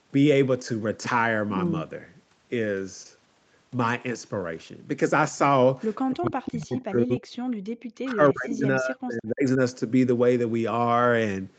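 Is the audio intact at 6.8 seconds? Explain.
No. From 6.14 to 7.27 s the speech sinks sharply, by around 40 dB at its deepest, and is affected over roughly a second. This is speech suppressed in double talk: with both sides talking at once, the echo canceller likely could not tell the talker from the loudspeaker echo and turned everything down. Right at 6.75 to 6.8 s a faint scrap of the voice comes back about 297 ms late, around 30 dB below the speech. This is an echo leak, likely from a loudspeaker echo canceller letting some of the microphone pickup through and sending it back.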